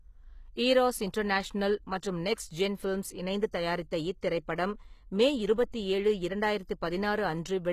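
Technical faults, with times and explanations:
Throughout: HE-AAC compression is the likely cause of plainly audible damage. The treble sounds rebuilt rather than captured, with s sounds gritty and metallic. This fits a low bitrate of around 20 kbps. On a spectrogram the upper bands look like smeared copies of lower ones, and everything stops sharply at 14.9 kHz.
5.71–5.74 s: pre-echo just after "இத்திரைப்படம் மே". A short hiss arrives about 30 ms before an attack, which sounds softened. The codec spread noise meant for the loud onset across its whole block. The waveform shows a low fuzzy ramp before the transient, and the spectrogram shows a broadband smear leading it.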